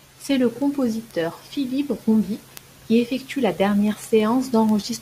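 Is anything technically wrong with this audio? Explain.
Yes. From 0.13 s to the end, the speech carries a steady run of sharp ticks, about one every 0.15 s, some noticeably stronger than others, around thirty in all. These are word clock ticks. The receiving device is running on its own clock instead of locking to the sender's, so each time the two clocks slip past each other a sample is dropped or repeated. The tick rate points to a clock mismatch of roughly 150 ppm.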